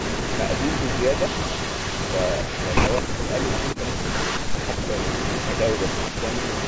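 An echo leak runs from 0.0 to 3.01 s: a copy of the speech trails it by 209 ms at about 5 dB below the direct sound, likely because a loudspeaker at one end was not fully cancelled and its residue was sent back. At 3.01 to 3.24 s comes speech suppressed in double talk, most likely the echo canceller turning down everything while both sides spoke, so the speech sinks by roughly 30 dB for about 200 ms. The same 209 ms echo returns from 3.31 to 4.39 s. A further double-talk dip of roughly 15 dB follows at 4.38 to 4.58 s. The echo is present again from 4.59 s to the end, and at 4.80 to 4.87 s a brief cut of roughly 20 dB briefly hollows out the speech.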